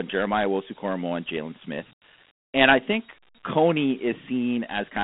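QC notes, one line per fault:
Throughout: Dialogic VOX ADPCM. The speech carries a gritty hiss that rides on the sound itself rather than sitting under it as steady noise, typical of 4-bit adaptive steps. Nothing is heard above about 3.9 kHz, which fits 32 kbps coding at 8,000 samples a second, unlike ordinary telephone band-limiting alone.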